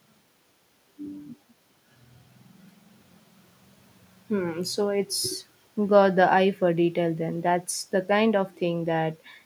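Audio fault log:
No technical faults can be heard anywhere in the recording; the signal stays intact and continuous throughout.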